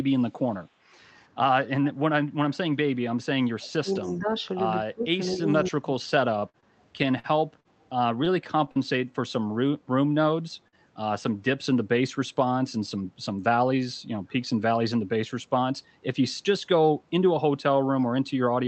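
Speech over a call, with four kinds of problem. First there's echo leak: a quiet copy of the far end's voice trailing about 191 ms behind, at 1.17–1.27 s, 1.84–1.94 s, 2.51–2.57 s and 3.94–4.15 s, sitting about 35, 25, 30 and 30 dB under the speech. That's likely the loudspeaker side's echo canceller letting some of its mic pickup back through. Then there's speech suppressed in double talk, where the voice ducks or drops out in chunks while both ends overlap. It happens at 3.53–4.32 s (dipping around 25 dB at worst), 4.83–5.19 s (around 20 dB), 5.41–5.47 s (only around 5 dB) and 5.70–5.89 s (around 20 dB). The canceller likely couldn't tell its own talker from the echo and turned both down. From 6.39 to 8.79 s you get repeated packet loss with that robotic, choppy sound. About ten short holes, the longest 44 ms, were each patched by stretching the previous sound, covering roughly a tenth of that span. 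Finally, at 10.68–10.75 s there's a short concealed packet loss: about 40 ms never arrived in time, and the fill-in from the preceding sound gives a brief smear before the real audio blends back in.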